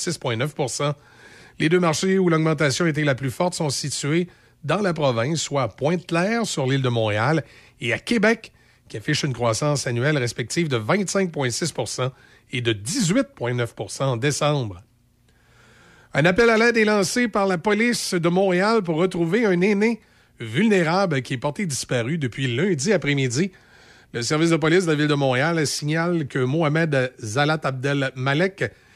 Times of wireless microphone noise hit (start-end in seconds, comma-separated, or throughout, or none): none